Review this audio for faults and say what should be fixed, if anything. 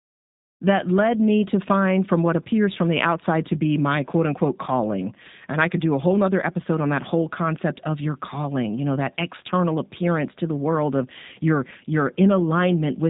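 Throughout the speech, G.729 codec damage is plainly audible: nothing above 4 kHz survives, and the voice sounds rough and faintly synthetic, as if rebuilt from a filter, pitch predictor and sparse pulses, which fits an 8 kbit/s G.729 link. A plain band-limit would only dull the sound, without this buzzy graininess. Carrying the call over a wideband codec such as G.722 or Opus would prevent it.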